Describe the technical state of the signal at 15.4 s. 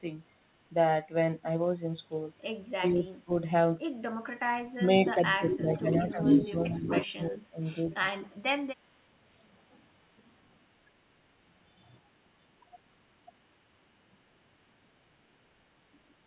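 At 15.4 s the signal is intact, with no fault present; the speech simply carries the narrowed telephone bandwidth of the call path, with nothing above 4 kHz.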